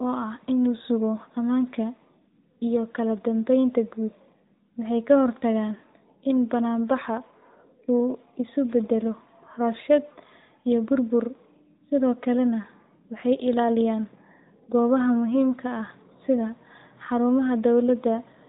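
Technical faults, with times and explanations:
Throughout, AMR narrowband mobile codec: the speech sounds thin and boxed-in, like a phone call, with a buzzy, synthetic edge that is plainly audible. Nothing above about 3.8 kHz survives, because the codec works at an 8 kHz sampling rate and rebuilds each 20 ms frame from a vocal-tract model excited by a few pulses. The degree of roughness fits one of AMR-NB's higher modes, around 10.2 kbps.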